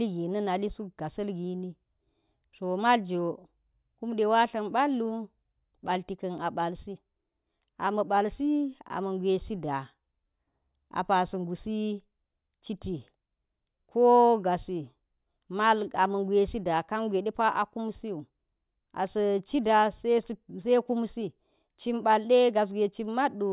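No audible technical faults.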